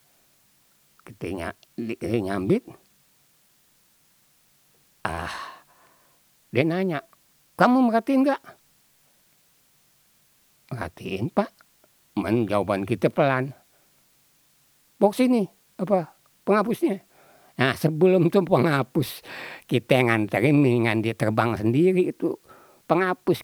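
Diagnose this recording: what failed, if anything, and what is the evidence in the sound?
A constant, even hiss sits under the speech from start to finish, roughly 40 dB below it, and stays the same through pauses and loud passages alike, with no grit or distortion on the speech itself. That points to low bit depth with dither at a sample-format conversion stage, consistent with about 10-bit resolution. Dither added before rounding turned the quantisation error into steady white noise rather than signal-dependent distortion.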